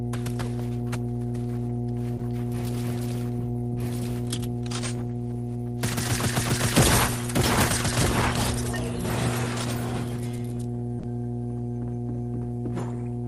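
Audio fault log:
throughout: mains hum. A steady 60 Hz tone sits under the whole clip, roughly as loud as the wanted sound itself. Power-line current is leaking into the signal path, likely through a ground loop or a nearby transformer, so the low drone never stops.
2.17–2.21 s and 10.99–11.05 s: short concealed packet loss. About 20 ms and then 40 ms of audio never arrived in time. The decoder filled each gap by extending the preceding sound, then blended back. That patch is heard as a brief smear or wobble.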